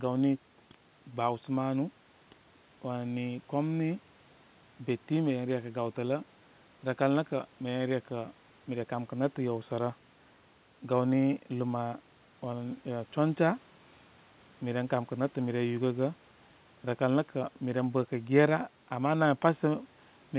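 No technical faults can be heard in this speech recording.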